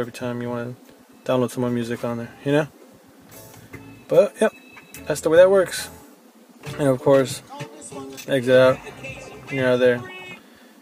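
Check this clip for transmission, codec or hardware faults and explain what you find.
No fault is audible anywhere in the signal.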